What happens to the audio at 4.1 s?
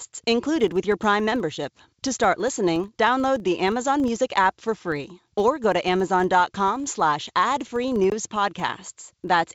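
At 4.1 s the speech carries a buzz from a filter restarted on every block, present through the whole clip. Each block starts from silence with a small click, about every 40 ms, so a 25 Hz buzz rises and falls with level. A waveform shows evenly spaced spikes; a spectrogram shows thin vertical lines.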